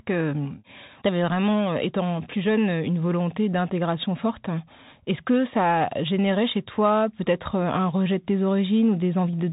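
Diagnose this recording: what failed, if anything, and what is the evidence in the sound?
The codec stage failed: a Bluetooth CVSD headset codec runs through the whole speech clip, with nothing above 3.8 kHz, scratchy s sounds and a granular hiss underneath. A one-bit, up-or-down delta modulator, which fits a 64 kbps link, cannot keep up with loud, fast high-frequency content.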